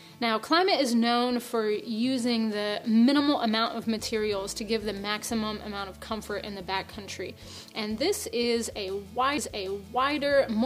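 At 9.38 s there is a CD skip: the laser lost its place on the disc's spiral and landed on a different turn, so the player muted for a few milliseconds and resumed from another point in the audio. It sounds like a small tick followed by an abrupt jump in continuity. On a waveform it shows as a tiny flat gap with mismatched material on either side, and on a spectrogram as a thin vertical broadband line.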